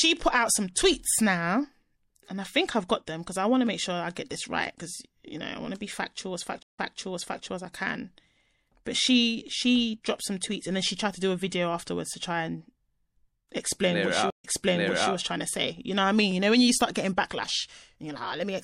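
The whole speech clip has a watery, swirly edge with chirpy s sounds. That's most likely MP3 compression at a low rate, and the damage is plainly audible, which fits something around 64 kbps starved of bits.

At 6.63 s, after "to be factual as", there's a stream reconnect. The audio drops out for about 0.15 s, then a fresh decoder picks up roughly 0.65 s earlier, so you hear a repeat before "as I can" by 7.43 s. The same thing happens at 14.30 s after "explain what she": about 0.13 s of silence, then a jump back of roughly 0.71 s, settling by 15.14 s into "trying to say".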